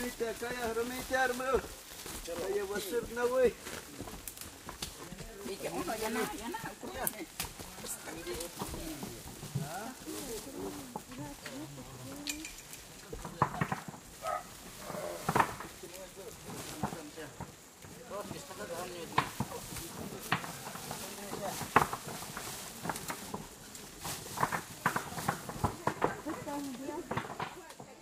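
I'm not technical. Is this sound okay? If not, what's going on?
No. In four places, small chunks of the stored audio, called compressed frames, were skipped: the player never got them or threw them out as damaged. The sound jumps ahead each time: at 5.46–5.49 s (about 150 ms lost), 21.02–21.05 s (about 100 ms), 24.59–24.62 s (about 50 ms) and 26.82–26.85 s (about 200 ms). The gaps fit chunks roughly 46 ms long.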